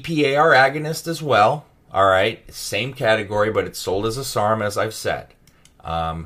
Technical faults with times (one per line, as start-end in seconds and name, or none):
none